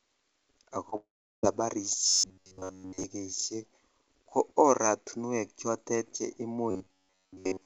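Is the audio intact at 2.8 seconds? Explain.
No. At 2.8 s the audio sits inside a stretch of robotic sound from repeated short buffers running from 2.07 to 3.04 s. Across essentially the whole span, fresh audio likely arrived too seldom, so a fragment of roughly 10.7 ms was replayed over and over, forcing a rigid metallic buzz at 93.8 Hz. On a spectrogram this shows as flat, evenly spaced harmonic stripes at multiples of 93.8 Hz; the waveform shows identical short cycles repeating.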